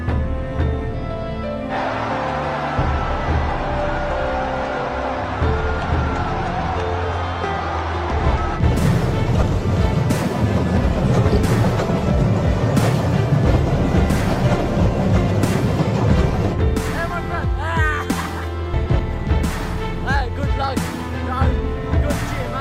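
Brief garbled flutters interrupt the audio at 8.11–8.37 s, 9.33–9.52 s and 18.74–19.00 s. These are frames out of order: two adjacent blocks of about 128 ms, or 96 ms in the second event, play swapped, with no time lost.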